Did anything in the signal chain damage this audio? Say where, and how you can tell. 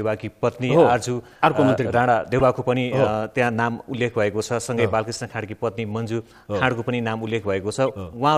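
Yes: corrupt frame decoded at 2.39 to 2.41 s, 5.30 s and 7.89 s, at the codec decoding stage. Each is a brief chirp-like burst spanning a couple of frames, loud at 2.39 s and much fainter later. Flipped bits made the decoder misplace energy across frequencies.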